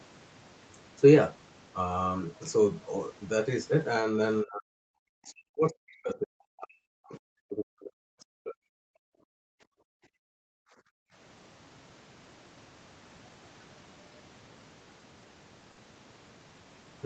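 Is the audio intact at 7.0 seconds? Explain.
No. At 7.0 seconds the audio sits inside a stretch of speech suppressed in double talk, running from 5.12 to 7.20 s. The speech dips and breaks up, falling by as much as about 40 dB at its deepest, for roughly two seconds in total. The likely cause is an echo canceller that could not tell the near talker from loudspeaker echo while both sides spoke, so it attenuated everything together.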